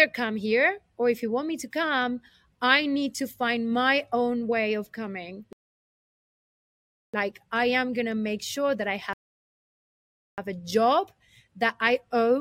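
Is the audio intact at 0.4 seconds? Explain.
Yes, the audio at 0.4 seconds is intact, with no dropout, click, distortion or other fault at that moment.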